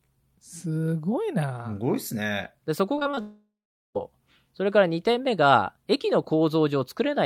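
From 2.95 to 3.19 s the speech turns choppy and robotic, which is repeated packet loss. Audio kept failing to arrive in short bursts, the longest hole only about 21 ms, and each one was papered over by stretching the sound just before it. Because the gaps come so close together, roughly 40% of that quarter-second is patched rather than real, so you get that clipped texture with bits of the speech missing.

Right after, from 3.21 to 3.97 s, things fall apart completely. The last sound smears out into a fading buzz or hiss, then there's dead quiet for about 0.43 s before the speech picks up again with roughly three-quarters of a second gone for good. That pattern of a smeared tail, silence, and a jump forward is the signature of a long network dropout, most likely the connection stalling outright rather than just dropping the odd packet.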